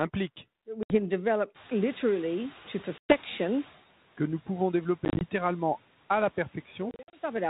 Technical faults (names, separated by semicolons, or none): packet loss on an ADPCM call; noise suppressor catching up